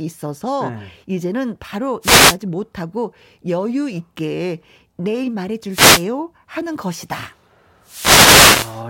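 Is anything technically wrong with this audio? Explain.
Yes. Three bursts of static cut across the speech at 2.01 to 2.37 s, 5.69 to 6.06 s and 7.83 to 8.81 s. Each is a swishing hiss, and the last one runs nearly a second. These are wireless microphone noise hits. The FM radio link faded as reflected signals cancelled the direct one, so receiver noise rose over the audio.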